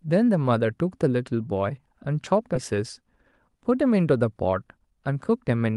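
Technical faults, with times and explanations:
2.55–2.57 s, skip ahead: the speech jumps abruptly forward with no gap, as if a fraction of a second was cut out and the two sides spliced together. Roughly 0.4 s of audio was discarded while later packets waited, so playback resumed further on.
4.53–5.50 s, jitter buffer speed-up: the speech runs about 6 percent faster at unchanged pitch and sounds slightly hurried. The receiver's buffer held too much audio, so it repeatedly trimmed short pitch-period pieces, around 70 ms in total, to reduce the delay.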